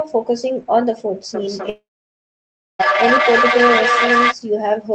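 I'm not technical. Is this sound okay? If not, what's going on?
No. From 1.34 to 4.37 s there's feedback howl: a whistle around 1 kHz, pulsing roughly every third of a second, getting as loud as the speech. From 1.69 to 2.81 s, a buzz fades into about a second of silence, and about 1.1 s of audio is gone for good, likely a long network dropout.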